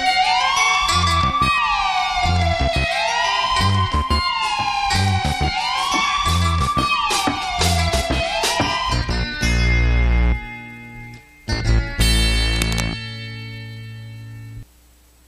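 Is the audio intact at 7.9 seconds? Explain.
No, a corrupt frame decoded at 7.85 s, just before that moment: flipped bits in a couple of compressed frames put energy at wrong frequencies, giving a brief chirp, squeak, blip, noise burst or hole.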